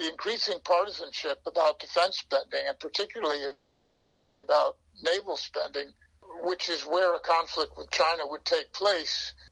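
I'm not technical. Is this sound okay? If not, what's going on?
No. At 3.47 to 3.52 s there is a short stall from a late packet. A piece of the call data arrived late, so the last sound was stretched for about 30 ms to cover the wait. Nothing is lost, but that moment drags briefly.

Right after, from 3.52 to 4.45 s, comes a call audio freeze. The sound hangs as a fading buzz that never drops to full silence, for about 0.9 s. Then it picks up exactly where it stopped, so nothing is missing. The likely cause is data held up on the network.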